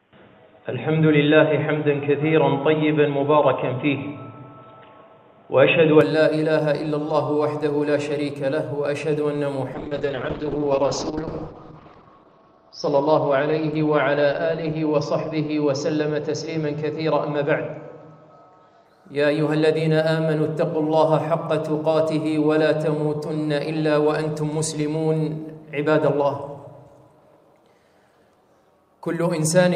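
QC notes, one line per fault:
0.00–6.01 s, input switched to a poorer device: nothing above 3.8 kHz, boxy tone, faint extra hiss. Likely a lesser microphone. It clears at 6.01 s with no gap.
9.74–18.91 s, call bitrate drop: the encoder falls from 48 to 7 kbps, and the band narrows from 20 kHz to 6 kHz. The sound turns coarse, watery and muffled, worst for 1.82 s.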